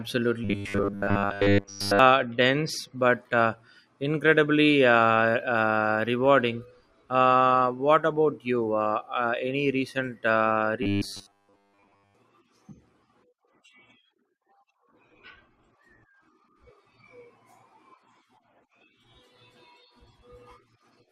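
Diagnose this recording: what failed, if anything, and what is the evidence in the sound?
The buffer stage is where this goes wrong: robotic sound from repeated short buffers, twice. From 0.44 to 1.99 s, just before "dense but uh incredibly", and again from 10.83 to 12.15 s, right after "uh any recent uh", the speech turns into a stiff metallic buzz pinned at 100 Hz. That pitch fits a 10 ms chunk being replayed, likely because audio is arriving too slowly, so most of the stretch is repeats rather than fresh sound.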